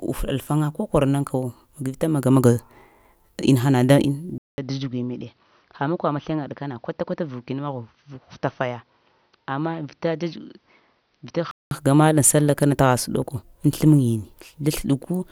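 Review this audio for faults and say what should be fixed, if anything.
From 4.38 s to 11.71 s, likely an input switched to a poorer device: a 0.2 s silent gap, a smaller waveform, and a spectrogram empty above 6.1 kHz. Lock recording to one input device and disable automatic switching to headset call profiles.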